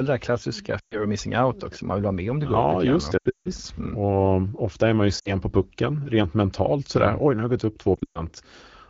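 Lost AMR speech frames in this speech clip hit at 0.79–1.07 s, 3.17–3.48 s after "just det", 5.20–5.33 s between "ofta är man ju" and "på pucken rent mentalt", and 7.96–8.22 s after "har det gått upp". At each point the decoder stretches the last good frame with fading gain, so the sound smears and dips before recovering.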